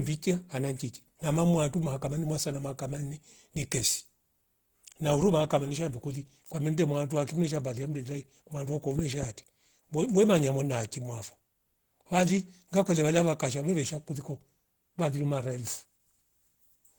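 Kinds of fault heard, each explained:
Opus compression: throughout, likely Opus in hybrid mode at a low rate around 16 kbps, leaving the speech plainly hoarse and grainy despite content reaching 20.1 kHz.
Loud pop: 8.99 to 9.25 s, two sharp pops about 10 dB above the speech, likely a sudden voltage pulse added while the speech continues underneath.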